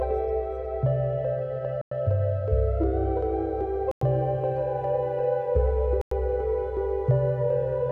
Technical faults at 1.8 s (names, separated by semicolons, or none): gap between chunks